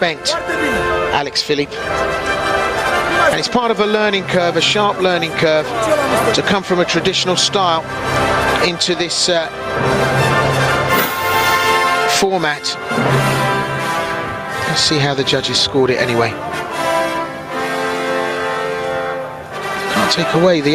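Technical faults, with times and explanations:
Throughout, gain pumping: the gain swings by roughly 15 dB, leaving everything flattened and squashed. Likely cause: input gain set far too high, with a fast limiter clamping down on every peak.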